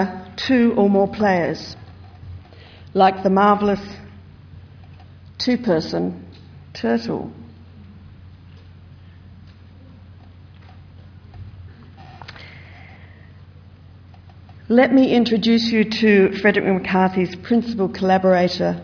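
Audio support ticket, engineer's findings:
No faults found in this clip. Nothing here points to a failing component, so no action is needed on the audio path.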